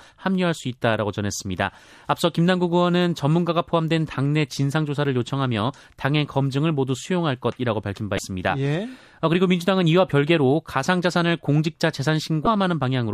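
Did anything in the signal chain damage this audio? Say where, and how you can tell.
Yes. The codec stage was hit by damaged data in a compressed stream: brief disruptions at 8.15 s and 12.44 s in this speech, each about 0.03 s long. Corrupt bytes made the decoder misread those frames and lose sync until it locked onto the next valid frame header.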